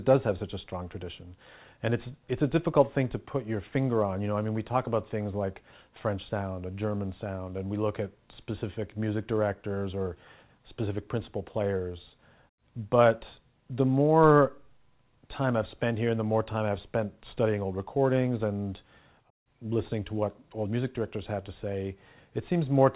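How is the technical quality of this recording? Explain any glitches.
No glitches turn up anywhere here, and the sound simply carries the narrow, telephone-like band you'd expect from the call path, with nothing above 4 kHz, which fits a G.711 mu-law codec running at 64 kbps.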